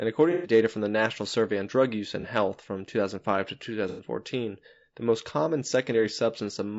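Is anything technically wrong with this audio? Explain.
Yes. Throughout, the speech sounds rough and grainy, with a dulled top band: likely low-delay AAC compression near 32 kbps, whose short frames resolve pitch poorly.

Smeared, noisy patches occur at 0.32–0.52 s (before "from the"), 2.21–2.26 s and 3.89–4.04 s. This is AAC frame loss with concealment, where the decoder fills gaps from the last good spectrum.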